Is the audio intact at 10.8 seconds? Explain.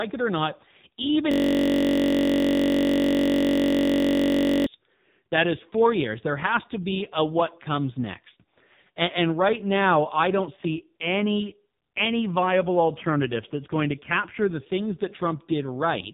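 No. At 10.8 seconds, as across the whole clip, the speech has passed through the AMR narrowband mobile codec. The signal was resampled to 8 kHz, so nothing above 4 kHz survives, and each 20 ms frame was rebuilt from a vocal-tract filter excited by only a few pulses. The heavy damage fits a low mode near 5.9 kbps. The voice sounds muffled, buzzy and synthetic, with a phone-line thinness.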